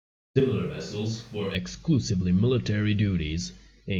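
The close microphone's signal most likely dropped out from 0.40 s to 1.55 s, and the recording falls back to a distant microphone farther from the speech. At 0.40 s, right before "exclusively military", the speech abruptly turns roomy and hollow, losing its low end and sitting about 5 dB quieter, with background room noise rising to roughly 30 dB below the speech. At 1.55 s the close sound snaps back just as suddenly.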